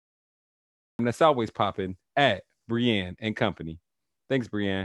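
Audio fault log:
0.00–0.99 s, cut-off start: nothing but digital silence, then the audio jumps in mid-sound at 0.99 s right on "that's always popping at", because capture began late.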